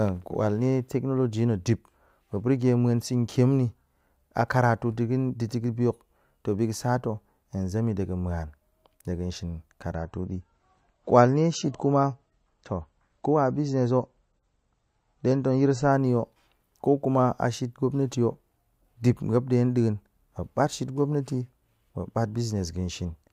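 Speech whose top end suddenly collapses at 9.92 s. For six seconds, until 15.92 s, nothing above 8.2 kHz remains, the sound turns dull, and codec artefacts rise. Full clarity then snaps back, with no gap at either switch. This is an adaptive stream at a lower bitrate: the player dropped to a leaner encoding while the connection slowed. The sound fits a shift from roughly 128 kbit/s MP3 down to about 34 kbit/s.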